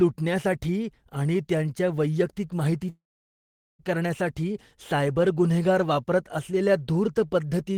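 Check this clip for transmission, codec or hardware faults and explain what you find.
One fault stands out, a long network dropout in this speech clip. From 2.89 to 3.82 s, right after "आणि त्यांच्या वैयक्तिक", the last sound smears into a brief fading buzz or hiss, then gives way to about 0.8 s of silence before speech resumes at "करण्यासाठी सायबर गुन्हेगार". Nearly 0.9 s of audio is simply gone. The likely cause is a stretch of packets that never reached the receiver. It extended the final fragment until its concealment gave out, then skipped ahead once data returned.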